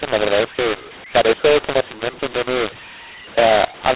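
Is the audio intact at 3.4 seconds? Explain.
No. The mu-law and A-law mixed up fault runs through the whole clip, including 3.4 s. Speech coded as A-law is decoded as mu-law, so levels are scrambled and the quietest samples are pushed well above silence, making the sound harsh and distorted, with noise filling pauses.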